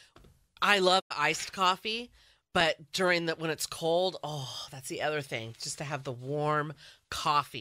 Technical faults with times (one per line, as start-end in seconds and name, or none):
0.99-1.12 digital broadcast dropout